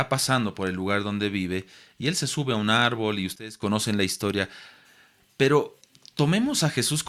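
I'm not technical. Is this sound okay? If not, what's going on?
No. At 3.36 s, right after "a un árbol y", there is a sudden gain jump: the volume was likely switched down instantly with no fade, so the speech and background drop sharply until "la historia" at 3.62 s.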